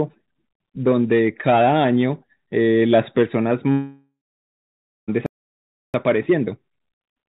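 Speech heard through a narrow call channel, with nothing above 4 kHz, which fits G.711 mu-law coding. A long network dropout runs from 3.72 s to 5.1 s. At 3.72 s the last sound is stretched into a buzzy tail that fades, and then about 0.93 s of silence follows. This is likely a network outage: roughly 1.36 s of audio never arrived, and the receiver's concealment could only extend what it had before giving up. When sound returns near 5.1 s, that lost stretch is simply missing. A playback stall follows from 5.26 s to 5.94 s. The output cuts out mid-flow for about 0.68 s, with no fading tail this time, likely because the player ran short of data or its thread was blocked, so nothing was sent to the output until it recovered. Time-compressed catch-up runs from 5.94 s to the end. The speech plays about 1.1 times faster at unchanged pitch. The player is working off the backlog built up during the stall by cutting out short pieces of audio and cross-fading the joins, which hurries delivery without shifting the pitch.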